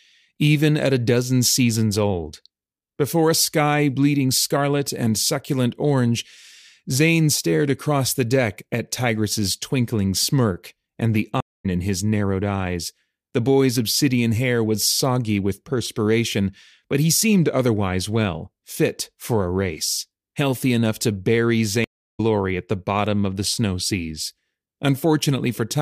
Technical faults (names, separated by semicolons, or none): stream reconnect